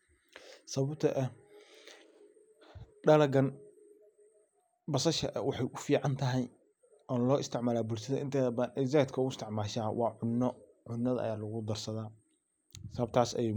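No dropouts, glitches, level jumps or other transport or processing faults are audible anywhere in the recording.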